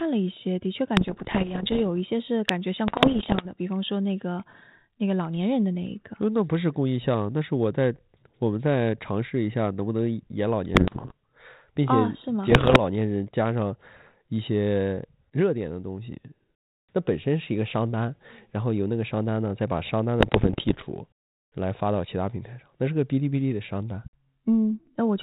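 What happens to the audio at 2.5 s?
At 2.49 s a calculation produced invalid numbers that were pinned at full scale, which fits a 32-sample block of about 0.67 ms. It is heard as a single sharp bang. The waveform shows a brief bar stuck flat at one extreme value, far beyond the speech peaks, and the spectrogram shows a thin full-band vertical line.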